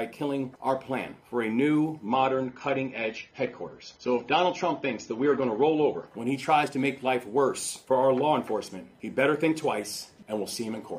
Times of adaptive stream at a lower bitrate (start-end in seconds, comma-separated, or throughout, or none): 2.07-6.07